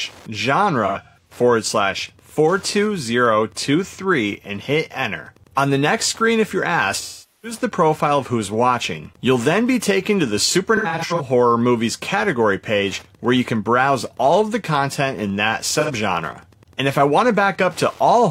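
Right from the start and running the whole way through there's Wi-Fi interference: a Wi-Fi radio sitting near the audio circuit, with its transmissions getting rectified into the signal. You get a steady tick about ten times a second, matching the 102.4 ms beacon interval, sitting somewhere around 35 dB under the programme. So it's low, a regular pulse under everything.

On top of that there are four patches of AAC frame loss with concealment, where the decoder lost frames and papered over them from the last good spectrum. From 0.86 to 1.32 s, 256 ms goes missing in pieces spread over about 430 ms, the longest stretch around 150 ms, so it comes across as smeared, noisy dropouts. At 7.00 to 7.59 s a solid 427 ms gap, which fits about ten frames, sags toward a thin noise floor before the audio fades back. From 10.76 to 11.22 s there's another scattered 256 ms, its longest run about a tenth of a second. 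Finally, 15.80 to 15.91 s is a quick 85 ms smear.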